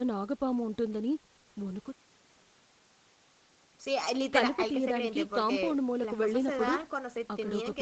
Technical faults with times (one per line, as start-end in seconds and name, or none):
none